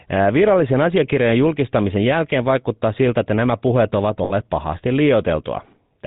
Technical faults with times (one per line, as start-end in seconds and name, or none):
0.00-6.07 GSM full-rate codec
4.24-4.33 lost GSM frames